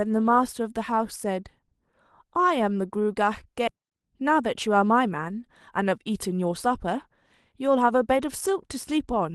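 At 3.67 s there is a skip ahead: roughly 0.7 s of speech is dropped and the two sides are butted together with no silence or fill. Unlike a dropout, there is no gap. The sentence simply jumps forward, cutting the delay by that amount.

Right after, from 3.76 to 5.12 s, a jitter buffer speed-up plays the speech at about 108% by trimming short pitch-period pieces. Similar stretches follow at 5.78 to 7.07 s (105%) and 7.60 to 8.99 s (106%). Pitch stays unchanged, which separates this from a sped-up recording: it just sounds slightly hurried.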